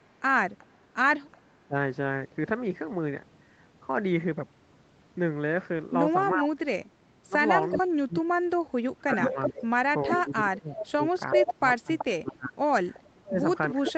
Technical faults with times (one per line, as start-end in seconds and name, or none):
0.00-1.39 echo leak
1.65-1.75 speech suppressed in double talk
6.34-13.97 speech suppressed in double talk
7.63-7.78 echo leak
9.21-12.02 echo leak
12.94-13.10 echo leak